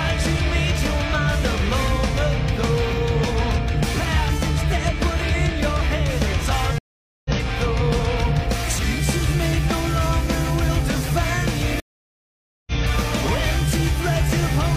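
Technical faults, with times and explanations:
6.78–7.30 s and 11.80–12.72 s, stream reconnect: the connection drops, leaving 0.47 s then 0.87 s of silence, and a fresh decoder resumes about half a second, then a second, later.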